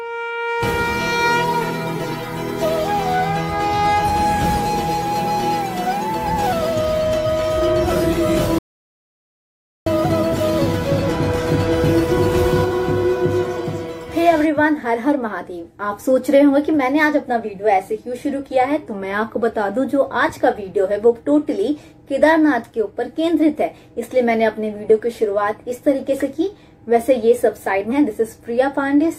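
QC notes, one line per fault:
8.59 to 9.86 s, audio dropout to silence: the sound cuts out mid-flow and returns about 1.28 s later. The gap is silent with no room tone. The input was likely lost while recording continued, so that stretch of audio is gone.
27.87 to 27.93 s, compressed frames skipped: the audio jumps ahead by around 400 ms, about seven frames of 46.4 ms each. Missing or rejected frames were never played.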